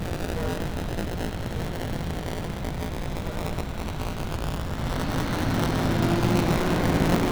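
Buffer tearing runs through the whole recording. A robotic rattle at 172 Hz, which fits a 256-sample buffer, rides on every sound. In each period, roughly a tenth of the buffer replays audio about 20 ms old, with hard joins on both sides.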